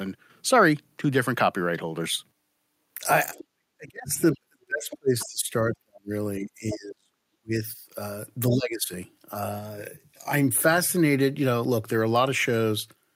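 At 3.35 to 3.45 s, the other side's voice leaks through. A faint second voice sits roughly 15 to 20 dB under the talker. It likely comes from a loudspeaker echo the canceller did not fully remove. The same scraps return at 4.90 to 4.97 s, 5.19 to 5.26 s and 6.71 to 6.76 s.

Speech suppressed in double talk follows at 3.54 to 4.12 s. It returns at 4.34 to 6.11 s and 6.39 to 7.61 s. Both sides were talking at once here. The echo canceller likely could not tell its own talker from the echo, so it turned everything down. The talker's voice drops by around 40 dB. A milder dip of about 15 dB comes at 8.51 to 8.92 s.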